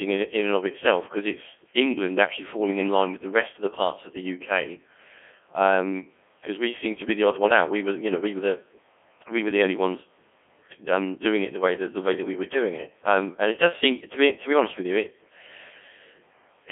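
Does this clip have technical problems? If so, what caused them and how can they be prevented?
Yes. Codec 2 vocoder damage runs throughout. The speech is heavily robotic and buzzy because the decoder rebuilds it from sine waves using only pitch, voicing, energy and spectral shape. That fits a rate near 1.6 kbit/s, band-limited to 250 Hz to 3.4 kHz, with nothing above 3.5 kHz. To prevent it, capture the source directly or send it through a higher-bitrate waveform codec instead of a low-rate vocoder link.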